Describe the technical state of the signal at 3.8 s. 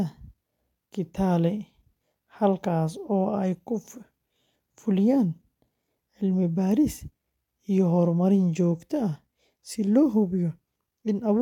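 The speech signal at 3.8 s is intact, with no audible fault at that moment.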